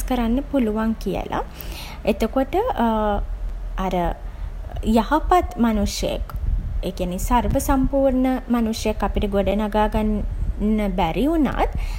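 Speech clip with a gap between chunks: holes of about 7 ms at 1.49, 3.49, 5.50, 7.51, 9.51 and 11.52 s, where 2 s chunks are joined with inserted silence.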